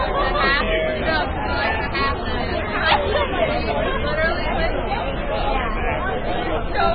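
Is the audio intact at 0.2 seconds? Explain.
No. Heavy MP3 compression runs throughout, likely at a very low bitrate around 15 kbps. Treble stops dead above 4.9 kHz, and weak detail flickers frame to frame with a watery swirl that a plain low-pass filter would not produce.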